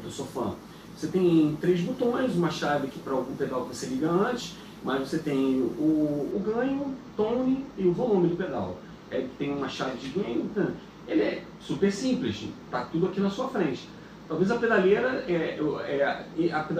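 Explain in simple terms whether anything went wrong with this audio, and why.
From 6.32 s to the end, one channel arrives a tiny fraction of a millisecond late. This channel delay (comb filtering) cancels highs around 10 kHz, making the sound duller.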